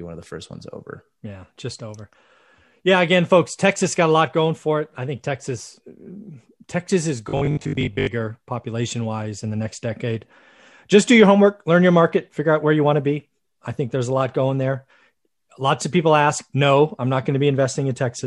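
From 7.29 to 8.07 s, before "population wise in the", robotic sound from repeated short buffers produces a metallic 50 Hz buzz, likely from looped 20 ms chunks. A spectrogram would show rigid, evenly spaced harmonic lines.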